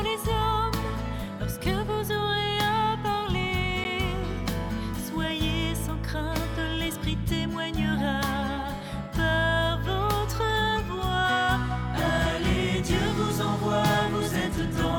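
At 3.84 s the audio drops into a block of digital silence, about 11 ms long, heard as a tick. That fits a missed 512-sample buffer.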